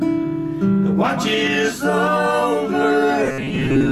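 Robotic sound from repeated short buffers runs from 3.24 to 3.92 s, turning the sound into a rigid, metallic buzz at 134 Hz. Fresh audio likely arrived too seldom, so a fragment of about 7.5 ms looped, replacing roughly half the material.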